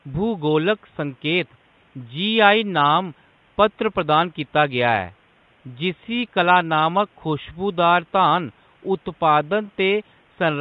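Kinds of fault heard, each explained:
Low-delay AAC compression: throughout, the speech turns rough and grainy, with noise between harmonics and a thin, synthetic top band, likely from AAC-ELD's short frames starved of bits near 32 kbps. Unlike the room noise about 38 dB down, this grain follows the voice.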